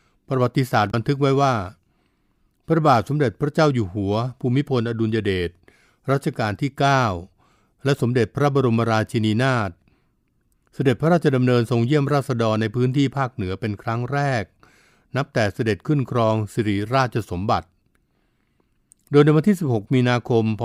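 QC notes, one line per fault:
0.88–0.94 s, damaged data in a compressed stream: a short stretch of the encoded speech stream arrived corrupted, with bytes lost or overwritten, so the decoder could not parse the frames in that window, lost frame sync and had to hunt for the next valid header. What comes out is a brief chirp, squawk, click or short hole lasting about 60 ms near the start of the clip, where misread or refused frame data garbles or drops the sound before normal decoding resumes.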